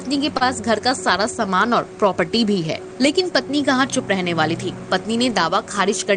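Right near the start, around 0.37 to 0.43 s, there's a short stall from a late packet: the jitter buffer ran dry, so the receiver held the last sound for about 34 ms, then picked up where it left off, nothing lost, just shifted 34 ms later.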